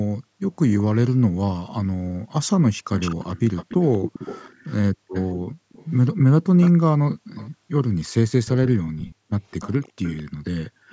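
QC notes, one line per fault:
0.19–0.41 s, 4.93–5.70 s, 7.15–7.71 s, 9.16–9.29 s, 10.33–10.89 s: background gated by the echo canceller. Each time far-end audio played through the loudspeaker, the canceller clamped the microphone down by as much as about 40 dB, so the room tone sinks or vanishes and then returns once the canceller releases. The dips last from about a tenth of a second up to half a second. On a waveform the noise floor collapses to near-flat gaps; a spectrogram shows dark vertical bands across all frequencies.
2.97–7.50 s and 8.46 s to the end: echo leak. A second copy of the speech trails the original by 213 ms, roughly 15 dB down in the first stretch and about 20 dB down in the second. This likely means the far side's loudspeaker output reached its microphone and its canceller let part of it through. On a spectrogram the harmonic patterns repeat as fainter, shifted ghosts about 0.2 s later; the waveform shows a smeared lower-level tail after each burst. 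Band-limiting with no content above 8 kHz is the call's normal microphone processing.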